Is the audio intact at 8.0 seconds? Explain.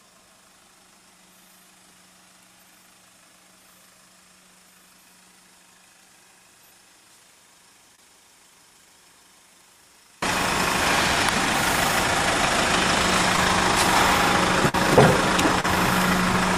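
No. Two faults overlap there. From 7.95 to 7.99 s there is a short concealed packet loss: about 20 ms of the stream never arrived, and the receiver covered the hole with roughly 24 ms of extrapolated sound, continuing what came before and then crossfading back. It is heard as a brief smear or wobble. A dropout would leave silence, and a click would be an instantaneous spike rather than a continuation of the sound.

That moment also falls inside a longer stretch, from the start to 10.22 s, where the sound drops by about 32 dB when heard in mono. This is most likely one channel inverted: with one stereo side in reversed polarity, whatever the two channels share cancels when they are summed. What remains is a faint residue of the channel difference. Plain attenuation would keep the full tone at a lower level, but this leaves only the faint difference.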